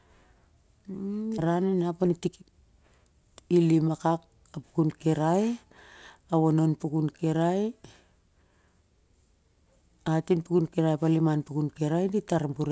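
Skip ahead at 1.38 to 1.40 s: with later packets already queued, a stretch of roughly 0.7 s of speech was thrown away, either lost in transit or dropped when the jitter buffer overflowed. No filler covers the hole. The speech on either side is joined almost directly, so the listener hears an abrupt forward jump with sounds missing, and the playout delay shrinks by about the same amount in that instant.

Jitter buffer speed-up from 1.48 to 3.66 s, ending just before "lim akak": the buffer was holding more audio than its target, as happens when delayed packets arrive in a burst. To drain it, the receiver repeatedly cut out short segments one or a few pitch periods long, removing around 0.3 s in total. Speech plays at 115 % speed at the same pitch and sounds hurried. The whole clip keeps the band limit of the call path, with nothing above 8 kHz.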